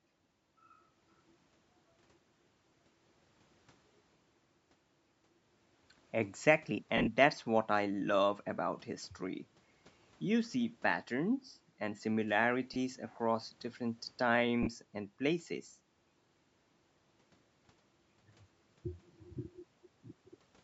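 Brief noisy smears replace the speech at 2.69–2.72, 6.97–7.08 (scattered gaps, the longest around 40 ms), 10.52–10.54, 12.74–12.76, 14.63–14.68 and 18.71–18.73 s. These are lost LE Audio frames: the decoder refilled each gap with the last spectrum carrying randomised signs.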